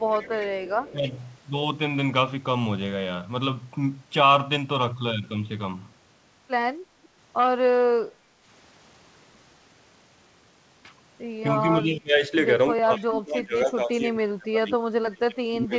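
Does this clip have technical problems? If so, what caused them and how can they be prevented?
Yes. A faint delayed copy of the speech trails the talker from 0.0 to 0.47 s and from 0.65 to 1.23 s, and briefly again at 12.98 to 13.04 s. It sits roughly 20 to 25 dB below the direct speech and lags it by about 271 ms. This is an echo leak, likely from a far end playing the call over a loudspeaker whose echo canceller let part of its microphone pickup return down the line. Using a headset at that end, or improving its echo cancellation, would prevent it.

The speech dips several times while the other side is talking. There is a slight sag of about 5 dB from 0.92 to 1.13 s, a much deeper cut of around 25 dB from 11.75 to 12.31 s, then about 30 dB of suppression across roughly two seconds from 12.75 to 14.82 s, and again from 15.02 s to the end. This is speech suppressed in double talk. Both sides spoke at once, and the echo canceller likely could not tell the local talker from loudspeaker echo, so it pulled everything down. 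Better double-talk detection in the canceller, or headsets that remove the echo source, would prevent it.

From 8.13 to 8.42 s the room sound briefly drops by about 7 dB and then returns. This is background gated by the echo canceller: while the loudspeaker was active, the canceller clamped the microphone hard for roughly 300 ms. Gentler suppression, or adding comfort noise during those moments, would prevent the audible hole. The sound also has nothing above 8 kHz, consistent with a wideband call codec on the path.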